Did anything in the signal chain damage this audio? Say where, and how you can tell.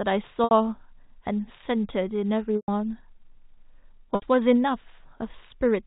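Yes: network packet loss with pitch repetition at 0.44–0.51, 2.57–2.68 and 4.15–4.22 s. The receiver loops the last pitch period, so each gap starts with a held, buzzy tone that fades out over about 50 ms.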